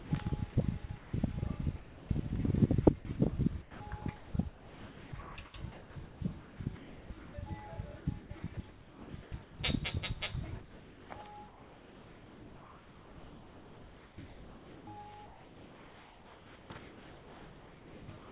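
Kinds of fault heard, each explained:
Sound chopped by the voice detector: Over 0 to 1.13 s, 3.62 to 7.34 s, 8.0 to 9.59 s and 10.61 s to the end, the sound keeps cutting in and out, with pieces replaced by steady synthetic hiss. The likely cause is the sender's detector toggling on and off repeatedly. From 10.61 s most of the stretch is filler, and from 3.62 to 7.34 s more than two seconds is. This many switches in one stretch is what separates it from a single dropout.
Sound dropped by the voice detector: At 1.76 to 2.09 s, about a third of a second of sound vanishes into even comfort noise. At 2.99 s, a brief 60 ms piece does the same. The likely cause is the detector judging quiet material to be background and pausing transmission until it triggers again. Each gap is a single clean hold of steady noise before the sound resumes, not the repeated flicker of chopping. Both gaps sit within a band limited to 4 kHz, which fits a 64 kbps G.711 A-law call path.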